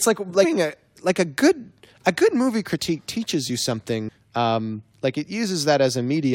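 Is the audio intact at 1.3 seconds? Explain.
Yes, the speech at 1.3 seconds is intact, with no audible fault at that moment.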